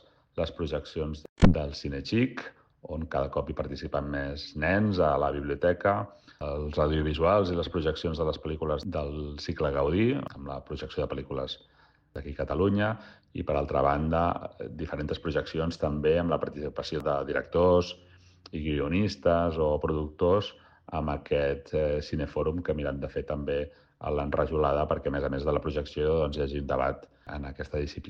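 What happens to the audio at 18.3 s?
Nothing goes wrong at 18.3 s; the audio plays through that moment intact, with no dropout, click or glitch.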